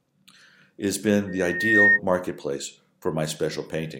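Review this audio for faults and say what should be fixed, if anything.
Loudspeaker feedback squeal runs from 1.27 to 2.00 s, right after "it has been". A 1.8 kHz tone takes roughly half a second to swell until it sits well above the speech. The microphone is re-amplifying its own loudspeaker, and the loop gain exceeds one at that frequency. A spectrogram shows a bright horizontal line at 1.8 kHz. The waveform shows a steadily growing envelope. Lower the monitor gain, notch 1.8 kHz, or move the microphone out of the loudspeaker's path.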